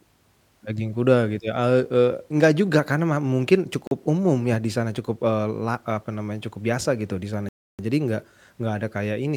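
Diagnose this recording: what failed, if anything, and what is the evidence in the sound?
Two dropouts to silence, 3.87 to 3.91 s (40 ms) and 7.49 to 7.79 s (0.3 s), with speech resuming after each. The waveform shows flat silent stretches, and the spectrogram shows blank full-band columns. Likely a Bluetooth stall at playback: delayed packets drained the headphone buffer until resends arrived.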